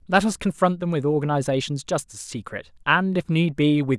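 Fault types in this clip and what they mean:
No audible faults detected.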